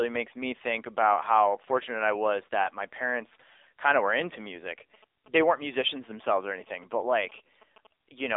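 From the start, the speech runs through an AMR narrowband mobile codec. It sits in a 300 Hz to 3.7 kHz phone band with nothing above 3.8 kHz, and the buzzy, synthetic edge from the coarse vocal-tract model is plainly audible, which fits a low rate around 7.4 kbps.

Right after "of were into music", from 4.94 s to 7.87 s, GSM signalling bursts come in: a nearby 2G phone's radio pulses get rectified by the audio circuit into a galloping ticking buzz at 217 Hz, sitting roughly 25 dB below the speech.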